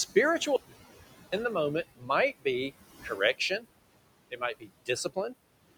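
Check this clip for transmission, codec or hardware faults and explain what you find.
Three faults stand out: a gap of total silence near the start, steady noise-suppressor processing across the whole clip, and three spots where that suppressor eats into the speech.

Audio dropout to silence, 0.56 to 1.33 s: about 0.76 s of silence, likely from a lost input. The waveform shows a dead-flat line, and the spectrogram is blank, with no room tone.

Noise suppressor artifacts, throughout: the room noise, which sits about 15 dB under the speech, is pulled down by about 19 dB between phrases. The spectrogram shows the noise floor pumping with the speech.

Speech cut by the noise suppressor, 1.95 to 2.1 s, 3.03 to 3.4 s and 4.6 to 4.69 s: quiet speech was treated as noise and cut by up to about 21, 14 and 17 dB, so it sounds swallowed. Each cut leaves a brief hole in the spectrogram's speech energy.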